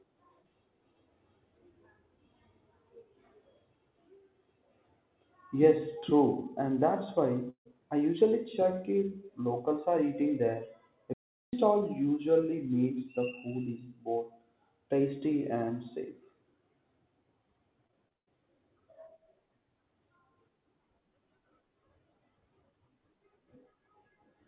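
Long network dropout, 7.5 to 7.67 s: the sound does not cut off cleanly. For about 150 ms the last fragment is stretched into a thin, fading buzz, then roughly 90 ms of near silence follows before the speech resumes with about 160 ms lost. This pattern of smeared continuation, then emptiness, then a jump forward is likely a network stall where no audio arrived and the receiver filled the hole from what it last had.

Digital wireless dropout, 11.13 to 11.53 s: here the audio simply goes away for about 0.4 s. A wireless link lost too much data to decode, so the receiver muted with a very quick fade rather than guessing. The result is a clean hole of near silence with no crackle, burst or hiss at either edge, and the speech returns abruptly on the far side.

Repeated packet loss (robotic sound), 17.87 to 18.29 s: within this short stretch the audio breaks up four times. The longest hole is 139 ms, and nearly half the span is made of patched-in sound rather than real signal. 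Each gap is covered by repeating the preceding fragment, and the next one comes before the voice can settle, giving a choppy texture with pieces of speech missing. Throughout, nothing sounds above 4 kHz, which points to a G.711 mu-law call path at 64 kbps.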